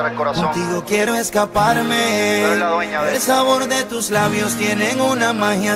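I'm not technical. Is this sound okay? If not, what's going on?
Yes, this sound is okay; there's nothing going on that needs fixing.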